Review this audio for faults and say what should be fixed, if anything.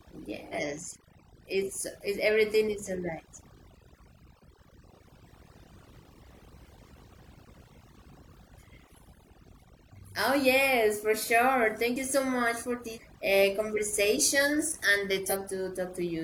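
Overdone noise removal runs through the whole speech recording. The reduction was set too strong, pulling individual frequency bands down whenever they sit near the estimated noise floor, so quiet speech detail disappears with the hiss. The background is near-silent with twinkling specks. Use a gentler reduction amount with a higher floor and check the result by ear.

Damaged data in a compressed stream produces short blips at 0.49–0.55 s, 12.92–12.98 s (just after "you so much for"), and 15.27–15.33 s. Corrupted bytes make the decoder misread those frames and lose sync until it finds the next valid header. Use a transport with error checking and verify file integrity after transfer.

Skips of roughly 20 ms occur at 2.01 s (just before "it's everything is alright"), 6.99 s and 11.96 s (just before "you so much for"), spaced 5 s apart. This regular interval likely points to audio missing between chunks, with a slice lost each time one 5-second block closes and the next opens. 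Buffer continuously across chunk boundaries so that no samples are dropped during the handover.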